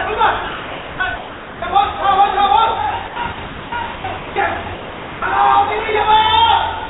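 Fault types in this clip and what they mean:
Sound chopped by the voice detector: the sender's voice activity detection likely switched transmission off three times, so 980 ms, 660 ms and 500 ms of real audio were replaced with generated comfort noise, leaving choppy sound with holes.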